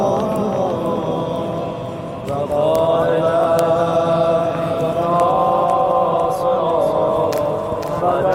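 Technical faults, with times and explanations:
5.31 to 7.31 s, adaptive stream at a lower bitrate: for two seconds the quality abruptly drops, with more codec artefacts, then recovers, all without a gap. The player switched to a cheaper encoding, consistent with Opus dropping from 64 to 24 kbit/s.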